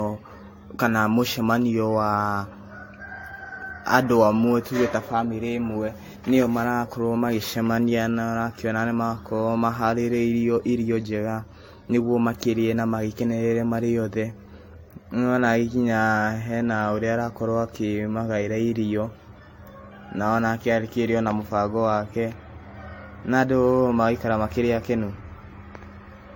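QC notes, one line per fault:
Throughout, generation loss: the speech sounds swirly, smeared and hollow, and consonant attacks are blurred rather than crisp. Nothing is heard above about 16.6 kHz. The likely cause is repeated lossy encoding, roughly five passes, and the character fits AAC-LC at around 64 kbit/s. Each decode and re-encode quantised the signal again on a shifted frame grid. So noise and spectral holes stacked up beyond what one pass at that bitrate would leave.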